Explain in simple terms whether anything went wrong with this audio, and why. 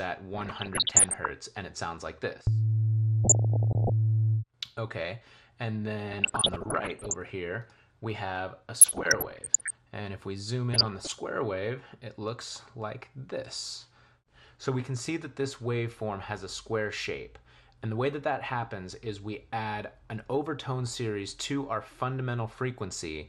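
MP2 compression runs through the whole clip: the sound is clearly dull and gurgly, likely because too few bits forced upper frequency bands off and left the rest coarse.

DAB burbling appears at 0.34 to 1.32 s, 3.24 to 3.92 s, 6.13 to 7.14 s, 8.77 to 9.76 s and 10.73 to 11.19 s: weak reception let errors through, causing short blips of noise.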